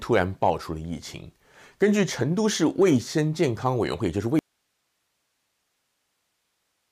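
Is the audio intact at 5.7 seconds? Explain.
No. At 5.7 seconds the speech is gone in an audio dropout to a faint residue that starts abruptly at 4.39 s and runs to the end of the clip. The signal was most likely lost upstream while the path after the break stayed live, so the gap holds only hiss, roughly 50 dB below the speech level. The sudden cut and the steady hiss separate it from a natural pause or a fade-out.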